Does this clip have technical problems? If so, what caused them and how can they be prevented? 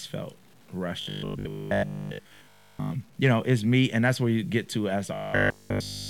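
Yes. Grainy distortion runs through the whole speech clip and follows the level of the voice. Quiet passages sound gritty and rough. This is low bit depth without dither. The likely cause is audio cut to 8 bits by plain truncation, with no dither added. The rounding error stays tied to the signal and sits roughly 35 dB below it. To prevent it, keep at least 16 bits and add dither whenever bit depth is reduced.

From 1.01 to 2.91 s, just before "you know it's me", the voice becomes a rigid metallic buzz. The same happens from 5.14 s to the end of the clip, right after "you get to as". This is robotic sound from repeated short buffers. The buzz sits at 50 Hz, which fits a 20 ms chunk being played again and again. Nearly all of the real audio in those spans is skipped. The likely cause is audio arriving too seldom for playback. To prevent it, use a larger jitter buffer and make sure the source delivers audio on time.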